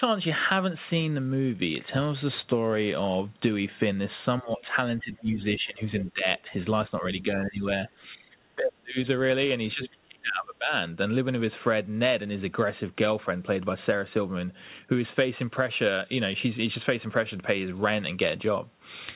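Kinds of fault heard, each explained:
Speech suppressed in double talk: The speech level dips repeatedly in six stretches, starting at 4.41, 6.13, 7.01, 8.04, 8.56 and 9.68 s and ending by 10.72 s. The first four drop by about 10 to 15 dB. The last two, at 8.56 and 9.68 s, go about 30 to 35 dB down, so the speech nearly cuts out. The likely cause is an echo canceller that could not separate the talker from loudspeaker echo while both sides spoke, and so turned both down.
Other side's voice leaking through: A short scrap of a second voice appears at 9.84 s. It lasts about 50 ms and sits roughly 10 dB below the main speech, inside the deep suppression that begins at 9.68 s. Like the rest of the audio, it is confined below 4 kHz. This is likely loudspeaker echo that the echo canceller failed to remove fully from the microphone signal, leaving a brief fragment rather than a sustained stretch.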